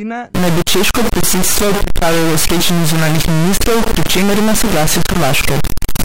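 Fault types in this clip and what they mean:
Stuck bit: from about 0.35 s to the end, the speech carries harsh, buzzy distortion and the pauses fill with loud noise. This points to a high-order bit likely jammed at one value, shifting about half the samples by a step of around -5 dBFS.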